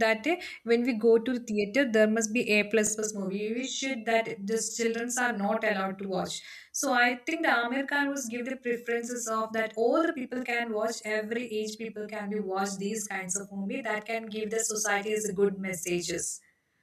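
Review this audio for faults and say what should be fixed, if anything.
Channel delay (doubling) runs from 2.87 s to the end of the speech. One channel arrives 40 ms behind the other, and when the pair is folded to mono, the late copy sits at equal level right behind the original. At 40 ms the two are too far apart to fuse, so every syllable sounds doubled, close to a short slap echo. To prevent it, realign the channels before summing, or correct whatever buffer is holding one side back.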